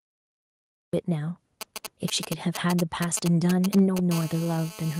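This speech clip opens with a cut-off start: digital silence runs from 0 to 0.93 s, then the sound begins abruptly mid-utterance with no attack, seen as a flat waveform ending in a sudden vertical edge. From 1.61 to 4.12 s, GSM signalling bursts from a nearby 2G phone add a galloping dit-dit-dit of brief 217 Hz buzzes, about 10 dB below the speech. On a spectrogram these appear as clustered vertical stripes with harmonic lines spaced 217 Hz apart. Between 3.76 and 3.81 s there is microphone overload, with peaks driven about 2 dB past the converter's limit, most likely from an input level set too high. The waveform tops look flattened, and the spectrogram shows a broadband crackle smear. During it, at 3.79 s, the microphone volume is stepped down by 2 dB, likely the call software reacting to that overload, visible as a sudden drop in the waveform envelope. From 4.12 s to the end, the phone settles into a continuous GSM phone buzz, a hard raspy 217 Hz tone about 16 dB below the speech, drawn as steady horizontal comb lines at 217 Hz and its harmonics.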